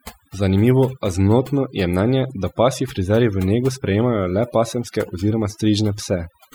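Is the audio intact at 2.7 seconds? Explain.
No. At 2.7 seconds, as throughout the clip, the background drops and breaks up into twinkling specks. This is overdone noise removal: an over-aggressive noise reducer cut individual frequency bands near its noise estimate, taking quieter parts of the voice with them.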